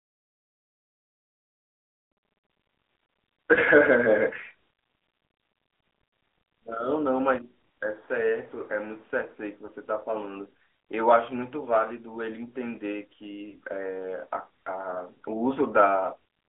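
Speech that sounds narrow and boxy throughout, confined to roughly 300 Hz to 3.5 kHz, with a plainly buzzy, synthetic edge. This is the AMR narrowband mobile codec, whose pulse-driven vocal tract model at a mid-level rate, fitting about 10.2 kbps, roughens the voice. Brief dips or warbles occur at 3.54, 9.66 and 13.50 s. These are lost AMR speech frames: each time, one 20 ms frame failed, and the decoder patched the gap by repeating the previous pitch and vocal tract settings at reduced gain.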